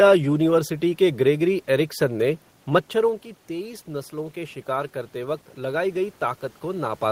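Right after "मच्छरों की", around 3 s, the talker drifts back and the input drops about 11 dB. From 3.48 to 7.11 s you get automatic gain rising: the AGC slowly lifts its gain by about 4 dB, so voice and room noise swell together.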